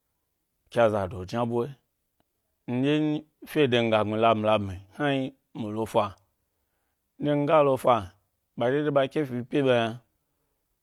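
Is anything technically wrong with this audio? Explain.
No, nothing technically wrong turns up in this speech recording, so there's really nothing here to flag.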